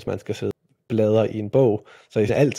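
Right after "man skal", at about 0.51 s, there's a quick blip, and another one turns up at 2.28 s. Both are damaged data in a compressed stream. A patch of the encoded file got corrupted, so the decoder chewed on bad bytes, lost its place in the frame sequence, and had to hunt for the next valid header. Each glitch is brief, the second running about 16 ms, cutting into the speech.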